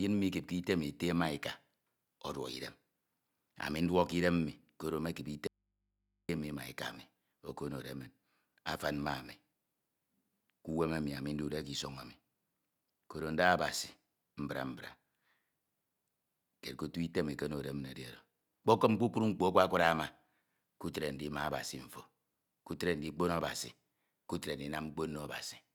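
After "koro mekip" at 5.47 s, the speech cuts abruptly for 0.82 s to a faint hum, returning at 6.29 s with "mi ma eka mi". This audio dropout to a faint residue, likely a lost source on a still-live input, differs from a pause through its hard edges and hum.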